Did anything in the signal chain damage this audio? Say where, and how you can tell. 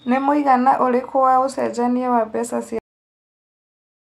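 Yes. The last buffers at the storage or playback stage were never written out, a cut-off end. The speech stops abruptly at 2.79 s, just after "wa ũcenjanĩa wa mbeca", mid-sound with no natural decay, then sits in digital silence until the clip ends.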